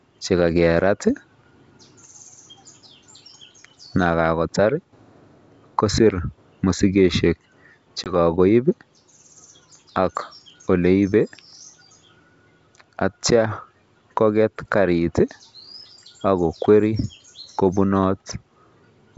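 At 8.04 s one packet on this ADPCM call went missing, roughly a single packet's worth, and 20 ms of the stream was filled with silence. That packet loss also knocked the decoder's adaptive predictor and step size out of line with the sender's. The speech breaks off in a sharp-edged hole, then comes back slightly distorted, settling by about 8.17 s while the G.722 wideband coding stays clear.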